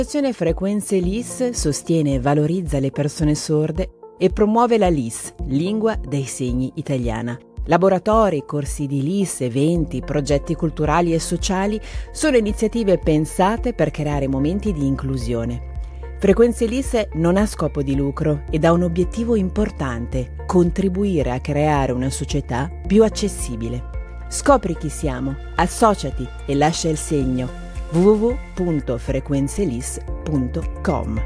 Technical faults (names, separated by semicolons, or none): none